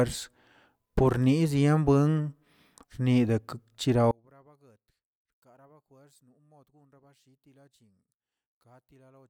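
From 4.11 s to the end at 9.29 s, the speech collapses to a faint trace, with the centred voice nearly gone and the level down by about 37 dB. The likely cause is one channel inverted: one side of the stereo pair has its polarity flipped, so when the two are combined to mono the shared centre content cancels, leaving only the small difference between the channels.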